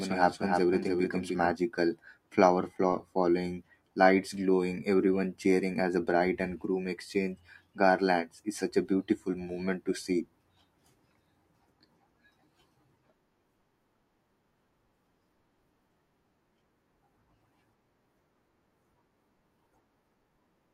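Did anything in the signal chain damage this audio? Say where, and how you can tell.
Yes. From the start to 1.5 s the speech has a doubled audio track: a dry copy about 5 dB quieter trailing by roughly 300 ms, then cutting off abruptly, likely from a second, slower capture path.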